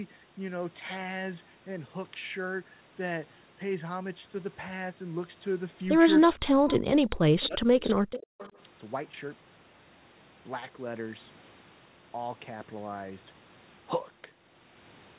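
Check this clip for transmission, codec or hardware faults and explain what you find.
Two faults appear between 6.41 and 8.55 s, with the audio band-limited to 4 kHz throughout, which fits a narrowband G.711 call codec.

Speech suppressed in double talk, 6.41–6.70 s and 7.34–8.55 s: with both sides talking at once, the echo canceller likely could not tell its own talker from loudspeaker echo and attenuated both. The speech dips by up to roughly 40 dB.

Echo leak, at 6.69–6.79, 7.06–7.18, 7.40–7.48, 7.81–7.95 and 8.11–8.52 s: a loudspeaker's echo likely slipped past the canceller on that side and was returned. A faint copy of the speech trails by 326 ms, in scraps about 20–30 dB down, rising to about 15 dB down in the last one.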